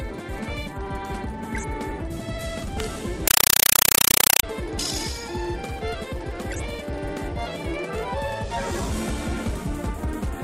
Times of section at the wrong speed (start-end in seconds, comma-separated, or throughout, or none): none